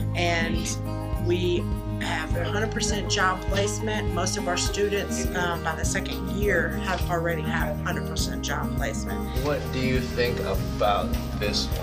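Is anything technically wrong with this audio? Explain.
Yes. Two bit error spikes occur, at 3.51 s and 6.19 s. Each is one corrupted sample, where a flipped bit jumps the value by a power of two and it snaps straight back. Each is heard as a sharp broadband tick unrelated to the sound, peaking at about -23 dBFS and about -29 dBFS respectively.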